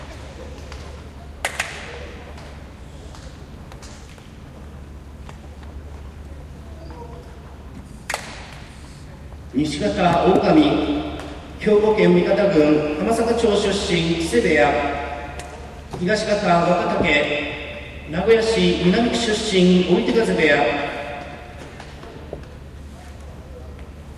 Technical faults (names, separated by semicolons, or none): none